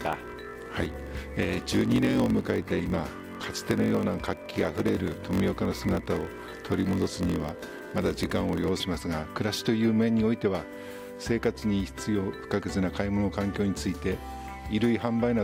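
From 0 to 8.70 s there is a block size mismatch (padded): each block is written short and filled out with zeros, which fits a 1024-sample read size. The inserted gaps produce a 46.9 Hz buzz, and the audio runs slowed to 0.938× at roughly normal pitch.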